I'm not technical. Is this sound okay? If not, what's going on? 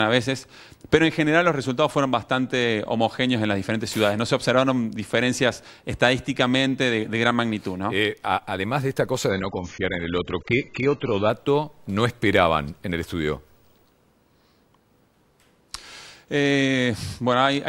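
No. There is an adaptive stream at a lower bitrate from 9.30 to 11.30 s. For those two seconds the connection slowed, so the player quietly switched to a much smaller, lower-quality copy of the same audio to avoid stopping. You hear the sound suddenly turn dull, with the crisp top end gone above about 7.6 kHz, and then snap back to full quality, all without any gap or pause.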